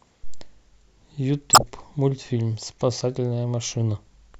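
Speech, with a corrupt frame decoded between 1.53 and 1.69 s. For roughly 0.16 s the audio gives way to a burst of garbled sound with error peaks around -5 dBFS. Damaged bits in the compressed stream were passed to the decoder, which played them without concealment, so misread gains and codes put energy at frequencies that have nothing to do with the speech. The length of the burst points to several consecutive frames being hit.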